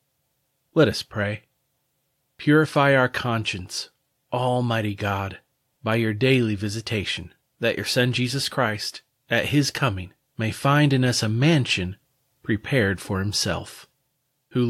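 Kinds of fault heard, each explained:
No kinds of fault are heard in this clip.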